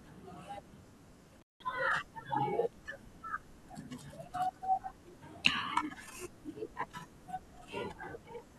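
At 1.40 s the speech drops out abruptly, with a short burst of crackle as the sound goes and again as it returns at about 1.63 s. For roughly 180 ms in between there is only a faint hiss. This is an intermittent contact: a loose plug or cable briefly lost its connection, so the signal path opened, and the scraping of the contacts as they parted and met again produced the crackle on either side of the gap.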